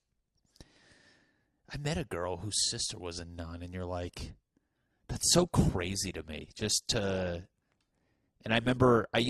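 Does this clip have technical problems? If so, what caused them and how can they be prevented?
Yes. Right after "a nun and you're", at 4.05 s, the speech suddenly turns swirly with no gap, and it stays that way to the end. That's an adaptive stream dropping to a lower bitrate, which fits a switch from about 64 down to 16 kbit/s Opus. Giving the connection more headroom or setting a higher minimum bitrate would prevent it.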